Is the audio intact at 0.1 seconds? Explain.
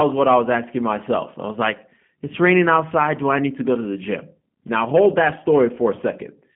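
No. At 0.1 s the speech already sounds plainly rough and synthetic, with nothing above 3.5 kHz. That is G.729 codec damage across the whole clip. The speech is rebuilt from a vocal-tract filter, pitch predictor and sparse pulses, which fits an 8 kbit/s VoIP line.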